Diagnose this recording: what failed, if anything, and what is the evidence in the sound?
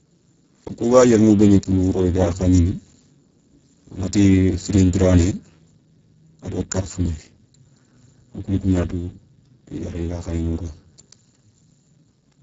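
The codec stage failed: the speech went through the Speex codec at a very low setting, which fits a bitrate near 6 kbps. Starved of excitation bits, the whole clip sounds hoarse and noisy, with nothing above 7.6 kHz and only shaped noise standing in for the upper band.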